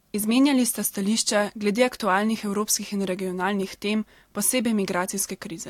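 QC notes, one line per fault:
No faults heard.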